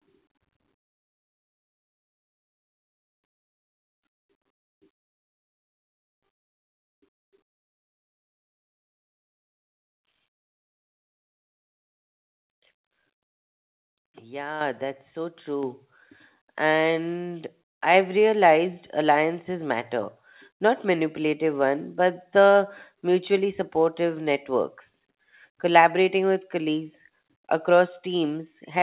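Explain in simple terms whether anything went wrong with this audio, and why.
Something did go wrong: the microphone volume stepped up twice, at 14.61 s and again at 15.63 s. The call software judged the microphone too quiet and turned its input level up in one sudden jump each time, the first larger than the second. What sets this apart from a speaker simply talking louder is that the voice and the background noise get louder together, instantly, and stay at the new level.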